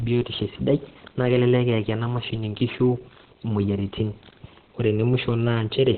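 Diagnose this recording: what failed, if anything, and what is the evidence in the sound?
Codec: the speech is muffled and hoarse throughout, with nothing above 4.3 kHz. This is likely Opus compression in its narrowband speech mode. A plain low-pass filter would dull the sound without that hoarseness.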